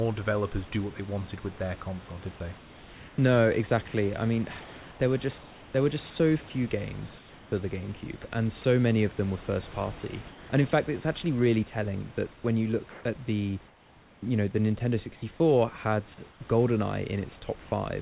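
It's a speech clip with a band-limited sound that tops out around 4 kHz, which fits a G.711 A-law call path. In the pauses at 2.58–3.18, 5.38–5.74, 10.28–10.5 (just after "them were first party"), 12.32–13.04 (after "it's actually really telling") and 13.68–14.22 and 16.3–16.4 s, you get comfort noise in place of the background. The real room tone turns into flat, featureless hiss about 2–4 dB quieter, likely from discontinuous transmission filling silences. Separately, the sound gets dropped by the voice detector for about 20 ms at 8.22 s and at 9.72 s, right after "of them were first". Brief slivers of speech are swapped for steady noise, so the detector likely mistook quiet bits of speech for background.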